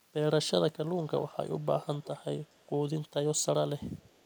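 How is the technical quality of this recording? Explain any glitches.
The recording has audible echo leak. A faint, delayed repeat of the speech trails the talker by about 0.44 s, at 0.97–1.36 s and 1.62–2.19 s (roughly 20 dB down), then fainter, near 40 dB down, at 2.46–2.65 s and from 3.98 s to the end. It likely comes from a far-end loudspeaker whose echo canceller let part of the returned sound through.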